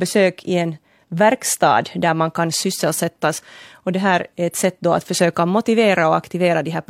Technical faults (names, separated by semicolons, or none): none